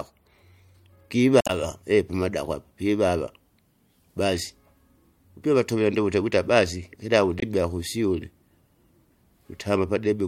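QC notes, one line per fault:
1.38–1.50 s, damaged data in a compressed stream: a short glitch in the speech. Corrupted bytes make the decoder misread frames, lose sync and hunt for the next header, adding about 8 ms.
7.39–7.43 s, damaged data in a compressed stream: a briefer blip from the same kind of corrupted frame data.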